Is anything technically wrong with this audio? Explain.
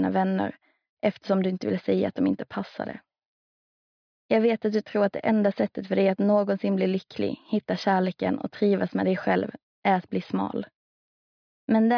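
No, nothing is technically wrong.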